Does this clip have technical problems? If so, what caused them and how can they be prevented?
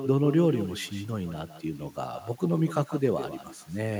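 Yes. Echo with no canceller runs through the whole clip: every phrase of the speech is followed by a quieter, thinner copy, about 11 dB below the original and trailing it by roughly 150 ms. The far end is playing the call through a loudspeaker, its microphone picks that playback up, and with no echo canceller to subtract it, the talker's own voice returns after the network round trip. Prevention: enable acoustic echo cancellation on the far-end device, or have that participant use headphones.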